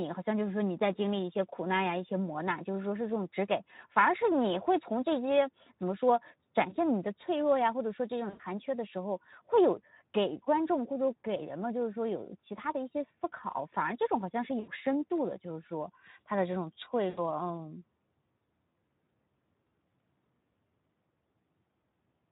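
Speech that sounds hoarse and grainy throughout carries plainly audible Speex codec damage, consistent with a low-rate setting around 11 kbps starving the excitation. Brief fading smears at 6.69–6.77 s, 8.29–8.41 s, 14.59–14.69 s and 17.10–17.20 s come from VoIP packet loss concealed by the speech codec, which extrapolates over gaps of about 20, 100, 80 and 80 ms.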